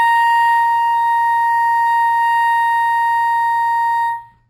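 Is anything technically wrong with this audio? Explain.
Yes. Throughout this music clip there is imaging from linear upsampling: straight-line interpolation left the top dulled and mirror images in the 6 to 12 kHz region, roughly 35 dB down, which fits a rise from a 12 kHz rate. They add a faint metallic shimmer on high content.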